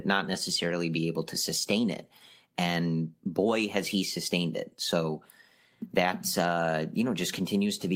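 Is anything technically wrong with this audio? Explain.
No, nothing technically wrong is audible anywhere in this speech recording.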